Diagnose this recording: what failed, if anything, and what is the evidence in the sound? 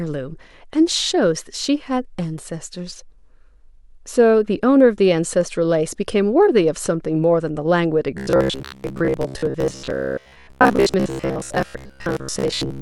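Robotic sound from repeated short buffers at the buffer stage, 8.18 s to 12.81 s: a fixed 66.8 Hz buzz, likely a repeated 15 ms chunk, unlike drifting codec warble.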